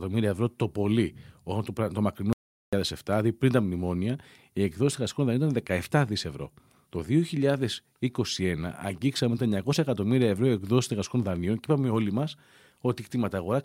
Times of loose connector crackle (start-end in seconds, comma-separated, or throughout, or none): none